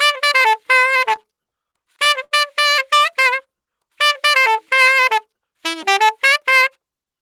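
Between 1.09 and 2.34 s, packets kept reaching the receiver late, so its jitter buffer drained eleven separate times. Each time it stretched out the last stretch of sound to cover the wait, about 196 ms in all, with the longest hold lasting 69 ms and nothing actually lost. These repeated stalls (stutter) take up about 16 percent of that span, so the audio catches and drags in small hitches instead of flowing.

From 5.46 to 5.81 s, the buffer had built up more audio than its target, and the receiver trimmed it back by cutting out short pitch-period-length pieces in quick succession, some 40 ms in total. This jitter buffer speed-up makes that third of a second run at 108 percent of normal speed with the pitch unchanged, so the sound comes across as briefly hurried or pushed ahead.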